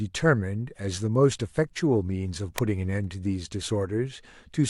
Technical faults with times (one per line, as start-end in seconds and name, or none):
2.58 electrical switching spike